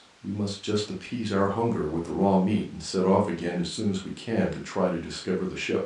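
No technical faults can be heard anywhere in the recording. The speech continues without any audible break or disturbance.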